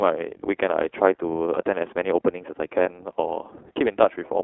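From start to finish the speech passes through the iLBC codec. The band is cut to roughly 300 Hz to 3.4 kHz, which gives a narrowband phone sound. Each frame is coded on its own, leaving a plainly audible rough, synthetic edge. That texture, rather than a muffled or lisping quality, sets it apart from wideband codecs. The character points to iLBC's 20 ms mode.

From 2.83 to 2.87 s, 40 ms of lost iLBC frames are concealed. The decoder repeats the last pitch cycle mixed with noise, producing a brief held, buzzy vowel. Unlike a dropout, nothing goes silent, and unlike a dependent codec, the voice recovers at once afterward.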